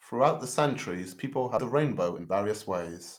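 At 1.57 to 1.59 s, just after "the centuries people", the speech has a skip ahead. Roughly 0.7 s of audio never plays. It was dropped in transit or discarded when the jitter buffer overflowed, while later audio was already queued. Nothing fills the gap. The two sides are spliced almost directly, so the speech lurches forward abruptly. The listener loses a chunk of the phrase, and the end-to-end delay falls by about the same amount.

From 1.75 s to 3.18 s comes a jitter buffer speed-up. The buffer was holding more audio than its target, as happens when delayed packets arrive in a burst. To drain the excess, the receiver cut out many short slices, each one or a few pitch periods long. About 0.3 s is removed in total. The speech plays at 117 percent speed but keeps its normal pitch. It sounds rushed through to the end.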